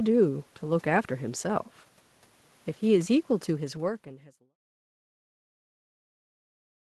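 No faults can be heard in this speech recording.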